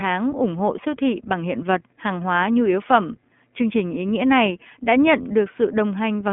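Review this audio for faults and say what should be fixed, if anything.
The iLBC codec colours the speech throughout. Nothing above about 3.7 kHz survives, so sibilants sound dull and clipped. The band sits roughly between 200 Hz and 3.4 kHz, like a phone line. Each short frame is coded on its own, which fits 20 ms frames at a rate near 15.2 kbps. The excitation is rebuilt frame by frame, so the voice sounds rough and slightly synthetic. To prevent it, record or route the audio through a wideband path and avoid narrowband VoIP codecs.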